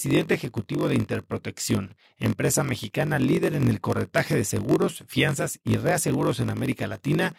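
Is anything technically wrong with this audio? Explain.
Yes. Throughout the speech there is a steady buzz at about 46.9 Hz, and the talk drags at 0.938 times normal speed. This is a block size mismatch (padded): each short written block is zero-filled up to a larger read size, which fits 1024 samples, inserting a gap per block.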